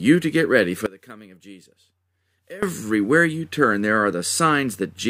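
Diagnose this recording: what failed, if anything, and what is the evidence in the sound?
From 0.86 to 2.63 s the speech drops about 22 dB, likely one channel inverted in analogue wiring, cancelling centred content when summed to mono.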